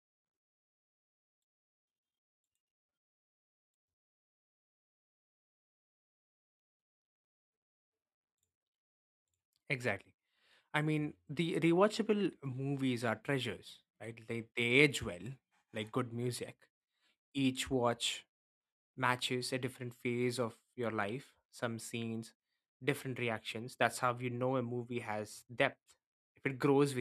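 Nothing in this speech recording stands out as a technical fault, so there's nothing to flag here.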